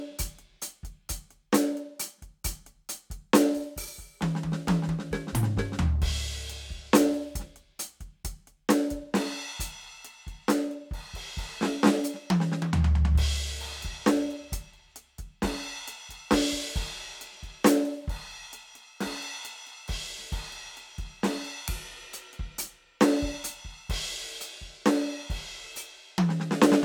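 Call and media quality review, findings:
No faults found in this music clip.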